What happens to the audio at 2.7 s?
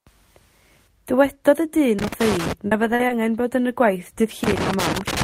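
Around 2.67 to 2.74 s there's a short concealed packet loss. About 40 ms of the speech never reached the decoder in time, so the receiver patched the gap by carrying the last bit of sound forward, following its pitch if it was voiced or as shaped noise if not, and then faded back into the real signal. You hear it as a quick smear or wobble.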